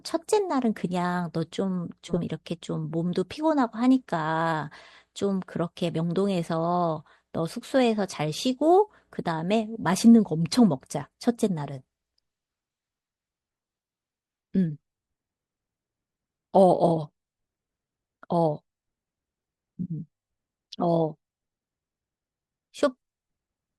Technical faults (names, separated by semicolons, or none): frames out of order